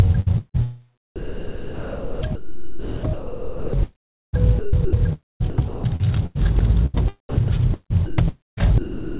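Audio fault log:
0.20–0.56 s, 1.16–8.62 s and 8.06–9.19 s, sound chopped by the voice detector: the sound turns choppy, with about 0.22 s, 4.0 s and 0.83 s replaced by comfort noise, likely because the sender's voice detector repeatedly switched transmission off.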